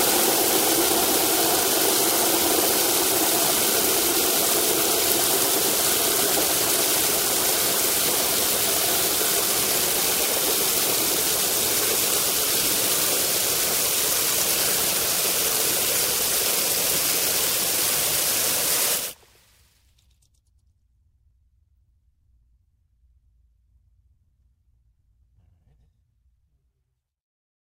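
An everyday sound recording carries a doubled audio track for its whole length: a full-band copy trails roughly a tenth of a second behind, about 5 dB quieter, with no decay or room colour. The likely cause is a second, slower capture path. On the waveform and spectrogram, every event appears twice, evenly spaced.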